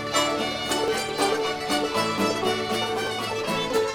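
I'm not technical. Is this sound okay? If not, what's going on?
No. There are sudden jumps forward at 0.88, 2.18 and 3.07 seconds, the one at 2.18 about three times as long. This is likely a dropped buffer (overrun): the recording fell behind and a small piece of audio was lost.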